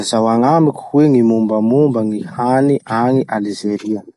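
Throughout the clip, the speech shows plainly audible MP3 compression damage, likely from a starved encoder, which fits a bitrate near 48 kbps. Nothing sounds above 11.3 kHz. The treble is dull. Weak detail flickers between frames, giving a watery, swirly texture.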